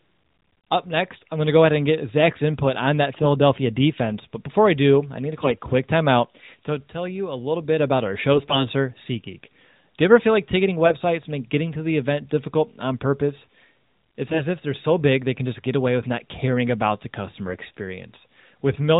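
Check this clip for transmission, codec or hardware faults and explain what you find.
The clip has AMR bit errors in four short bursts of narrowband AMR speech, which fits the 12.2 kbps mode. They fall at 3.18 to 3.27 s, at 5.42 to 5.57 s between "do I need to" and "quick timeout to tell", at 8.32 to 8.65 s after "little bit about our", and at 10.86 to 10.95 s between "ever feel like ticketing" and "make getting to the". A few percent of the weakly protected bits arrive flipped. The excitation pulses land wrongly. Pitch and level hold, but the speech turns hoarse and gargly.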